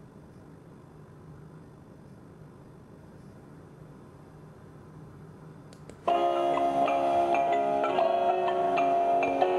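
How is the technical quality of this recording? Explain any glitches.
The opening stretch has one clear fault. From 0.0 to 2.98 s there is a time-stretched section. The audio runs about 1.85 times faster, yet its pitch holds. Likely, software squeezed it by dropping short pieces. It sounds rushed.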